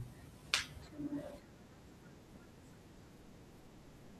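No technical faults are audible anywhere in this speech recording.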